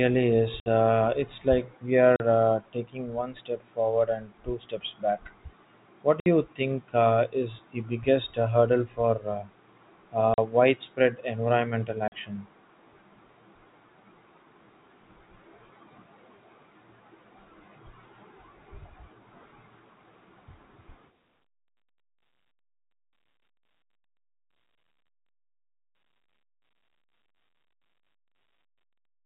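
Packet loss filled with silence at 0.6, 2.16 (after "it's like we"), 6.2, 10.34 and 12.08 s: 40 to 60 ms hard-edged gaps where missing packets played as silence, fitting 20 ms packets.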